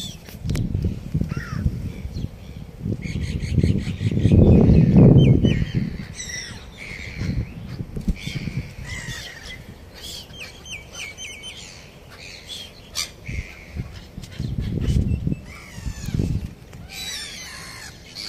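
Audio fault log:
3.49 s and 7.41 s: dropped samples. Each moment is a single sharp click, much too brief to take away any audible sound, most likely because a fraction of a millisecond of samples went missing so the waveform leaps straight from one value to a later one. That sudden step produces broadband energy, which on a spectrogram appears as a thin vertical line running top to bottom, and in the waveform as an abrupt discontinuity in an otherwise smooth trace.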